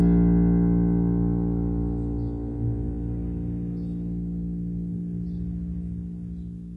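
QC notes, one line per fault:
throughout, HE-AAC compression: the music's treble sounds gritty and metallic, with nothing above 11.4 kHz. This is likely HE-AAC at a very low rate, around 12 kbps, rebuilding highs by copying lower bands upward so harmonics misalign.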